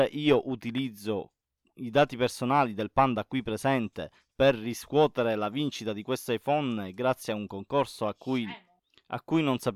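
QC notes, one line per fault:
The signal shows no audible technical faults at any point in the recording.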